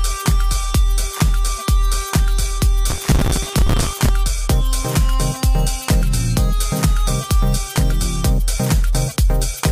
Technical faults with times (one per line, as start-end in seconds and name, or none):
2.90-4.09 processor overload crackle